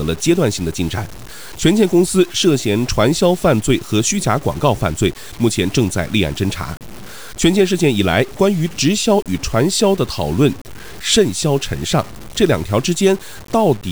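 Throughout, low bit depth without dither: the speech was likely truncated to a 6-bit word length, leaving grainy distortion that tracks the sound, only about 25 dB down.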